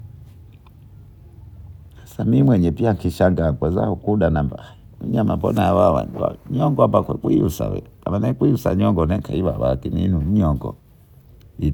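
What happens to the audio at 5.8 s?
At 5.8 s the speech carries on without interruption, with no dropout, click, glitch or other audible fault at that moment.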